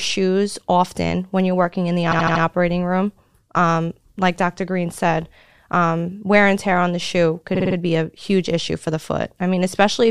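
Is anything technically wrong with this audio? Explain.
Yes, the speech has repeated frames at 2.10 to 2.42 s and again at 7.54 to 7.75 s. A short compressed block, about 78 ms, then about 52 ms, which fits a few codec frames, is played again four times. The result is a rapid stutter, adding about 0.31 s and 0.21 s. Unlike a dropout, nothing is lost. The same fragment simply loops.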